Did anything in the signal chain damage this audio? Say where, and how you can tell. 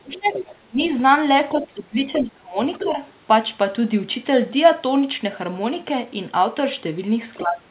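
Yes, and it's in the call processing, specifically the echo canceller. The speech suppressed in double talk shows up as the talker ducking hard from 0.0 to 0.82 s, by as much as 30 dB or so, and again from 1.58 to 2.57 s, down about 25 dB at worst. Shorter, shallower dips follow at 2.78 to 2.99 s and 7.42 to 7.63 s. The first three line up with a second voice underneath, so it's likely the canceller clamping both directions when it can't separate them.

That second voice is the other side's voice leaking through: faint fragments at 0.25 to 0.55 s, 2.13 to 2.23 s and 2.73 to 2.9 s, sitting roughly 10 dB under the talker, plus a quieter scrap at 7.34 to 7.41 s, around 20 dB down. It's likely far-end audio from the loudspeaker getting back into the mic and slipping past the echo canceller. You'll hear the whole band stop at 4 kHz, which fits a G.711 mu-law call path at 64 kbps.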